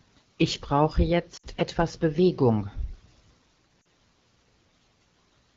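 Speech carried over AMR wideband has lost AMR speech frames at 1.37 to 1.47 s and 3.82 to 3.85 s. The decoder covers each gap by repeating its last pitch and vocal tract settings at falling gain, which drops the sound to near silence within two frames. The two gaps fit about three and two lost 20 ms frames.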